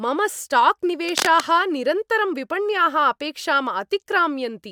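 From about 1.08 to 1.40 s there's cable scratch noise, a dense, uneven rustling burst sitting nearly as loud as the speech. It's likely a worn cable or connector being moved, its contact resistance jumping around and spraying scratchy noise across the signal.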